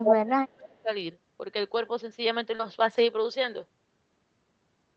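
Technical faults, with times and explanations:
0.04–0.14 s, echo leak: a delayed copy arrives about 0.27 s behind and slightly louder than the speech, likely loudspeaker sound escaping the far end's echo canceller, not room reverberation.
0.09–0.9 s, speech suppressed in double talk: the speech drops by roughly 35 dB in pieces over about 0.7 s, likely the canceller turning down both its own talker and the loudspeaker echo, unlike a steady level fade.
2.55–2.61 s, short concealed packet loss: about 40 ms went missing and 36 ms was filled by extending the preceding sound, giving a brief smear rather than a hard dropout.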